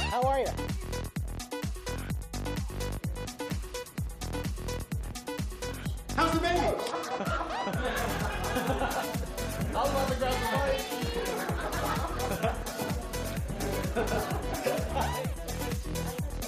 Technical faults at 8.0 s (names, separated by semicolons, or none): none